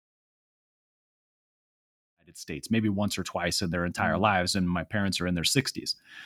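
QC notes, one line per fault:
No faults found; the speech rises on a smooth editorial fade-in from around 2 s to full level at 2.81 s.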